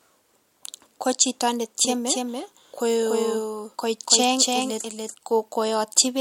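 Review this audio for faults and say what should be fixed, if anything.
From 1.85 s to 5.15 s, just after "ko chito", a dry, full-band copy trails roughly 300 ms behind at about 5 dB lower and cuts in and out abruptly: a doubled audio track, likely from a second, slower capture path. To prevent it, route the source through only one capture path and mute any duplicate monitoring or loopback feed before mixing.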